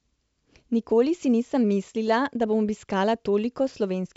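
No technical faults can be heard in this speech, which carries the band-limited sound of G.722 wideband telephone coding at 64 kbit/s, with nothing present above about 7.7 kHz.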